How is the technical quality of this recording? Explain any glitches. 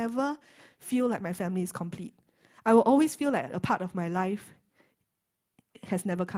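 Nothing stood out as a technical problem when listening to this recording.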